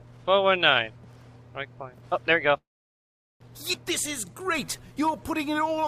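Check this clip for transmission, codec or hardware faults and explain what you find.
Three transmission faults are audible, all packet-timing problems on a call path.

From 2.57 to 3.42 s the sound briefly carries on as a fading buzz, then goes silent for about 0.77 s before resuming exactly where it stopped. This is a call audio freeze, likely from packets stalling so the jitter buffer ran dry; nothing is lost, but about 0.83 s of gap is inserted.

At 3.72 to 3.75 s the audio jumps forward with almost no break, the two sides butted together. This is a skip ahead: roughly half a second of audio was discarded while later audio was already waiting.

From 4.26 to 5.81 s the sound runs at 90% speed with unchanged pitch, drawn out. This is a jitter buffer slow-down, with repeated pitch periods adding 156 ms to rebuild the buffer's reserve.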